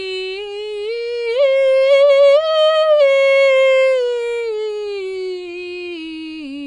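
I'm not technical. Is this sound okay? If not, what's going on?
No. From start to finish the music sounds dull, with nothing above about 9.8 kHz, and it has a smeared, plainly watery texture. That is likely AAC compression. A merely muffled recording would lose its top end but stay clean rather than watery.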